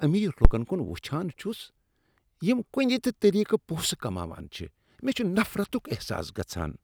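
A deep low thump hits at 0.45 to 0.52 s, peaking at about -2 dBFS and dying away within roughly 17 ms, just before "کن وٕچھان". This is a phantom power thump: supply voltage switched on a live input, its step pushed through the coupling capacitors.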